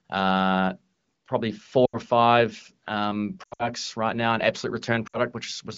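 Three brief stretches where the speech smears, warbles and dips toward silence, then returns weak and rough: 1.85 to 1.97 s just before "or five um", 3.43 to 3.69 s between "or five um" and "right now", and 5.07 to 5.18 s. These are lost AMR speech frames. The decoder repeated the last good pitch and vocal tract settings with falling gain, so each gap fades quickly rather than cutting off abruptly. The first dropout spans 80 ms, which fits four 20 ms frames. The second totals 140 ms scattered over 160 ms, with no run longer than 80 ms, so it warbles unevenly. The third spans 60 ms. The AMR wideband (HD Voice) coding at 15.85 kbit/s makes the fade to silence faster than narrowband would.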